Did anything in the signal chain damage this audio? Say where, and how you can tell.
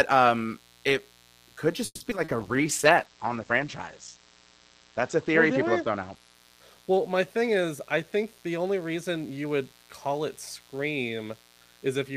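Yes. A mains buzz sits under the whole clip, about 30 dB below the speech, and it enters in the analogue wiring. The fundamental is 60 Hz, but what gives it away is the raspy edge: sharp switching spikes twice per mains cycle throw harmonics well up into the kilohertz range. A plain hum from ground-loop coupling would be a smooth, low tone. This one is steady and buzzy, which points to a dimmer, rectifier or unshielded run.

Repeated packet loss produces a robotic stretch from 1.85 s to 2.30 s, right after "um it could", and the damage happens at the network stage. Four holes open in under half a second, the longest 150 ms. The receiver fills 210 ms by stretching the last sound, and 80 ms is simply missing, so nearly half the span is concealment. It differs from a bitrate drop because pieces actually vanish and the sound turns choppy, rather than staying continuous but coarse.

A call bitrate drop runs from 2.40 s to 8.59 s and originates in call processing and the codec. 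The bandwidth estimate fell, and the sound fits Opus falling from about 32 kbps to 10 kbps, bottoming out for about 2.4 s. At that rate the audio band shrinks from 20 kHz to 8 kHz and the coding becomes rough and watery. That roughness separates it from a simple low-pass filter or a muffled microphone, which would sound dull but clean.

A jitter buffer speed-up runs from 7.47 s to 9.45 s, just before "would call it", overlapping the end of the low-bitrate stretch. The receiver's buffer had overfilled, so it cut many short pitch-period slices, around 150 ms in total, and playback runs at 108% speed. The pitch stays where it was, and that is the tell. A resampling or clock-rate error would raise the pitch along with the pace, whereas here only the tempo hurries.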